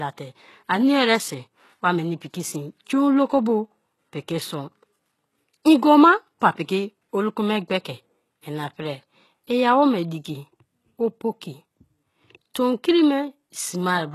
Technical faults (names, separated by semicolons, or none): HE-AAC compression